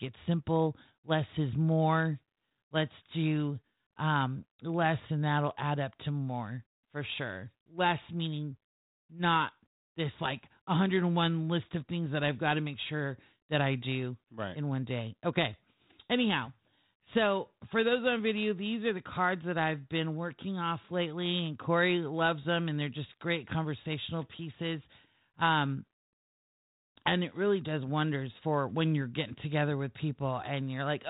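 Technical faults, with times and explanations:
No technical faults detected.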